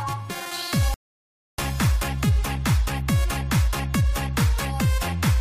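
At 0.94 s the sound drops abruptly into silence and stays there until 1.58 s, then picks up at exactly the point where it broke off, with nothing skipped or repeated. This is a rebuffering stall: playback consumed all the audio that had been downloaded and had to halt until more data arrived. The gap adds 0.64 s to the running time without removing any material.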